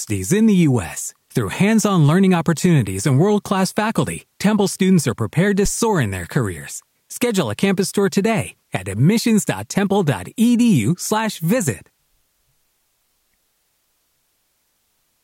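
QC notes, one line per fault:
5.66–5.71 s, phantom power thump: supply switched on a live input, step through coupling capacitors gives a deep thump peaking about -12 dBFS, decaying in 13 ms.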